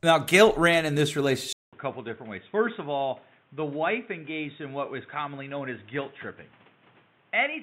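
At 1.53 s, after "guilt ran in this", the input likely switched to a poorer device: a 200 ms gap, then speech runs dull, quieter and noisier, cut off above 3.8 kHz.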